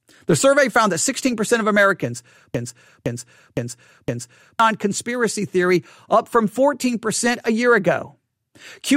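From 1.19 to 1.58 s there is DAB burbling. Bit errors slipped past error correction into the audio data. Short blips of noise land in single sub-bands.

From 2.55 to 4.60 s, a broken-record loop repeats one 0.51 s fragment four times. The likely cause is a stalled stream. The speech underneath is lost.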